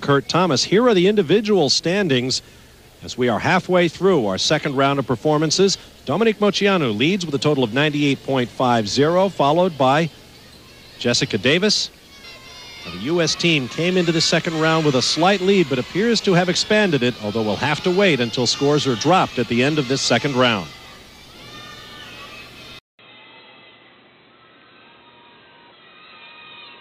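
The audio runs without this fault until 22.79 s, where a gap of about 200 ms opens and the sound returns duller and boxier through to the end. From there nothing remains above 4.1 kHz, the level sits roughly 5 dB lower, and a new background noise appears well below the signal. This is most likely an input switched to a poorer device, such as a narrowband headset call profile, bringing its own tone, gain and noise floor.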